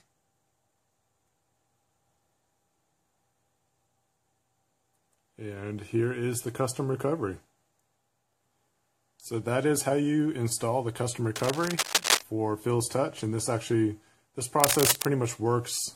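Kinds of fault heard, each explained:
Cable scratch noise: from 11.36 to 12.21 s and again from 14.60 to 15.07 s, dense, uneven bursts of scratching and rustling sit over the sound at roughly the same level as the signal itself. The likely cause is a worn cable, connector or control whose contact resistance fluctuates rapidly as it is moved.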